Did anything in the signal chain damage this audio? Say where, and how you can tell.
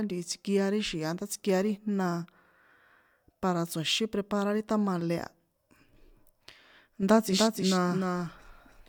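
Yes. From 7.29 s to the end, a clean, roomless copy of the speech trails by about a third of a second, about 5 dB down: a doubled audio track, likely from a second, slower capture path or a misaligned edit.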